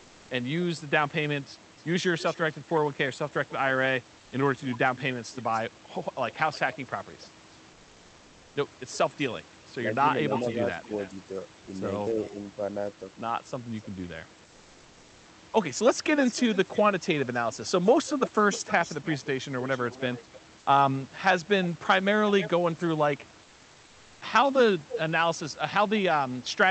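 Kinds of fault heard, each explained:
Echo leak: a faint repeat trailing the sound by about 0.29 s, roughly 20 dB down, from 1.64 to 22.5 s. It is a discrete copy, not reverb, likely from incompletely cancelled loudspeaker pickup.
Comfort noise in place of the background: at 4.19–4.31 s and 23.43–24.21 s the real background becomes steady, featureless hiss about 2 dB quieter. Unlike a dropout it never goes silent, likely from discontinuous transmission.
Speech suppressed in double talk: between 10.03 and 12.38 s the level dips by up to about 5 dB, around 0.3 s in all. These are level dips rather than gaps, likely from the echo canceller turning down overlapping talk.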